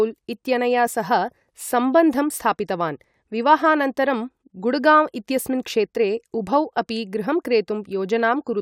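A short speech recording, and no technical fault can be heard anywhere in it. With nothing going wrong in the signal path, there are no times or causes to give.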